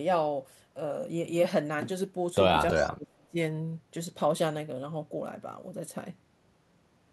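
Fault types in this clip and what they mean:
Dropped buffer (overrun) at 1.97 s: the speech jumps forward with no silence, as if a few milliseconds were cut out. This is likely an input overrun: the program read its samples too late, the hardware overwrote them, and the two edges were spliced together.
Echo leak from 2.71 to 2.91 s: a faint delayed copy of the speech trails the original by 322 ms, about 15 dB quieter. It likely comes from a loudspeaker echo that the echo canceller left partly unremoved and sent back into the call.
Speech suppressed in double talk from 2.71 to 3.36 s: the talker's level sinks by up to about 30 dB while the far side's sound plays on the loudspeaker. The likely cause is an echo canceller that could not separate the local speech from the echo and turned both down together.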